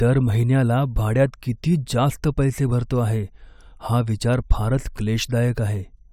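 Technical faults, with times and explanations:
No technical faults audible.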